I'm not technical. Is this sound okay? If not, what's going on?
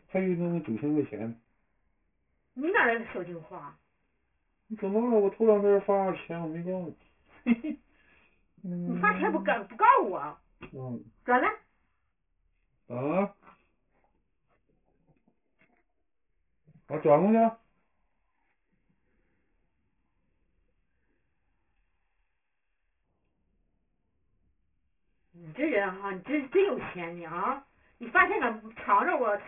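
No. Aliasing runs through the whole clip: sharp, high sounds fold back below about 3 kHz as gritty, metallic false tones instead of simply turning muffled.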